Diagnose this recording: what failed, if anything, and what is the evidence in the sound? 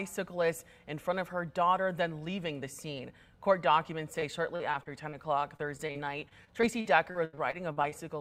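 Network stage: repeated packet loss (robotic sound) from 4.19 to 5.15 s (five short holes, longest 38 ms) and again from 5.57 to 7.94 s (fifteen holes, up to 81 ms). Each hole is patched by stretching the preceding sound, so unlike a single dropout it turns choppy rather than briefly silent.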